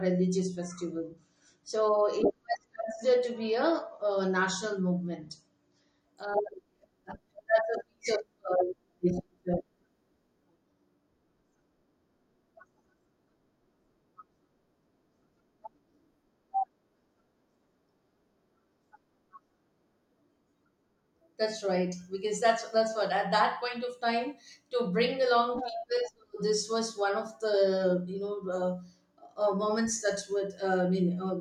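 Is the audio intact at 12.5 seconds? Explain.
Yes, at 12.5 seconds the speech plays through cleanly, with no dropout, click, distortion or other fault to be heard at that moment.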